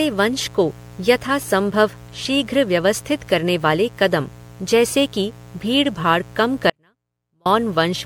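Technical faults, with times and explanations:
Throughout, mains buzz: sharp switching spikes twice per 60 Hz cycle give a raspy buzz about 20 dB below the speech, seen as evenly stacked harmonic lines on the spectrogram.
Throughout, generation loss: swirly, smeared, hollow sound with blurred attacks, likely from roughly ten rounds of MP3 re-encoding near 96 kbit/s; spectrogram shows holes and nothing above 19.8 kHz.
6.70–7.46 s, audio dropout to a faint residue: after "जैसे कि भीड़भाड़ कम" the speech abruptly drops for 0.76 s, leaving only a faint trace about 40 dB down; likely a lost signal path, seen as a sudden waveform collapse.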